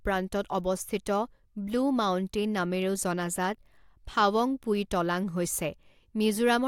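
Nothing stood out as a technical fault on listening to this speech recording.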